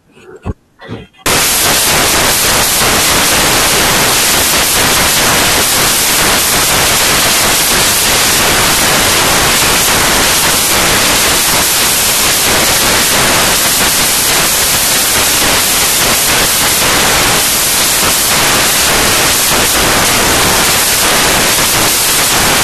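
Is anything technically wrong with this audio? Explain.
Yes. From 1.26 s to the end, the samples are built from the wrong bytes: the reader is misaligned or has the byte order swapped, so each sample's rapidly changing low bits become its large part. The speech turns into loud, harsh broadband noise, close to white on loud sounds.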